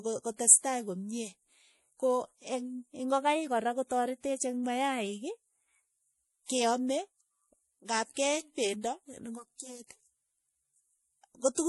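Throughout, the speech has a hard ceiling near 11.5 kHz and plainly audible watery swirl on sibilants, likely MP3 compression at a bitrate around 48 kbps. A plain low-pass filter would not swirl.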